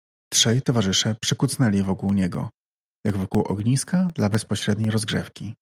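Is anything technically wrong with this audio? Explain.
Yes. There are periodic USB or driver dropouts from 1.84 s to 5.35 s. Every 0.25 s, a background task on the USB bus or in the audio driver stalls the stream, and a sliver of audio, about a millisecond, is lost and replaced by silence. Around fifteen of these gaps fall at that steady quarter-second spacing, and they are heard as ticks or pops wherever they land on the speech.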